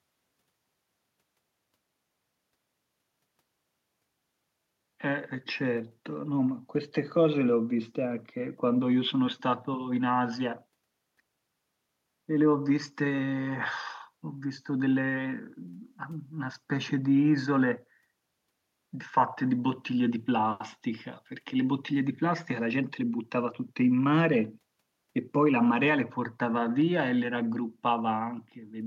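Nothing in this recording trips the ear as a technical fault; it just runs along as ordinary speech with no glitches to point to.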